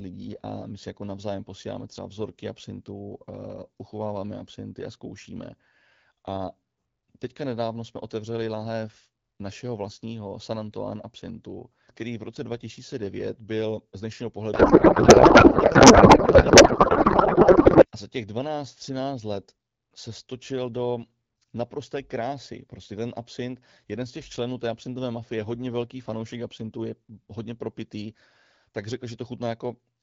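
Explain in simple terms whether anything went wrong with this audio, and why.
Codec payload misread at 14.53 to 17.85 s, after "byl z dnešního": the receiver unpacked the speech data in the wrong layout, turning it into garbled, warbling noise.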